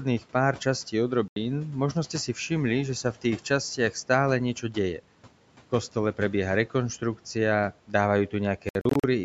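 Bluetooth dropout hits this speech clip twice: at 1.28 s, just after "pár častí", the sound cuts to silence for about 81 ms, and from 8.69 to 9.04 s it breaks up into several short gaps totalling about 183 ms, the longest about 61 ms. After each hole the speech resumes further along, as if it had kept playing. The likely cause is wireless packets arriving too late and being discarded, which fits roughly four lost packets in the first gap and nine in the second.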